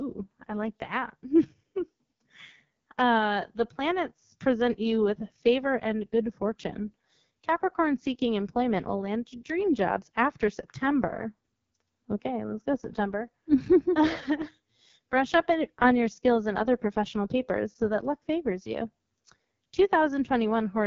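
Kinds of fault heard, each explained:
AMR wideband (HD Voice) codec: The speech sounds rough and raspy all the way through, and there is no content above about 7.2 kHz. This is the sound of AMR-WB running at 6.6 kbit/s, one of its two lowest rates. The codec models the voice as pulses driving a vocal tract filter up to 6.4 kHz. At this rate too few bits reach that model, which leaves heavy coding damage, and the top band is only filled with shaped noise.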